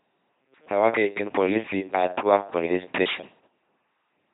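The speech runs throughout through an LPC-10 vocoder, whose pulse-or-noise excitation leaves a buzzy robotic voice with nothing above 3.9 kHz, consistent with 2.4 kbit/s.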